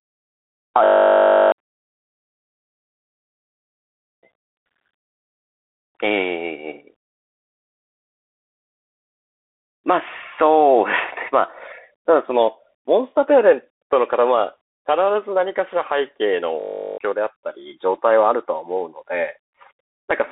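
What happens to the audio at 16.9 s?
At 16.9 s the audio is caught in a system hang loop running from 16.6 to 16.98 s. The system stalled while the hardware kept replaying one 20 ms stretch of its ring buffer, 19 times. The result is a steady 50 Hz buzz replacing roughly 0.4 s of speech.

The same moment also carries the Bluetooth CVSD headset codec damage present throughout. It is band-limited to about 250 Hz–3.6 kHz with nothing above 3.8 kHz, which fits a 64 kbps CVSD link. Its one-bit adaptive-step coding adds granular hiss, scratchy s sounds and overload distortion on loud high content.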